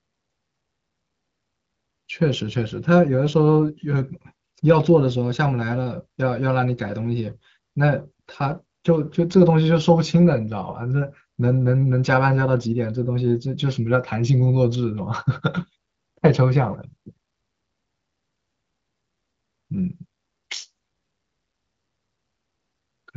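Speech over an AMR wideband (HD Voice) codec path, its texture consistent with a rate around 15.85 kbit/s and its content stopping at 7.4 kHz, shows no technical faults.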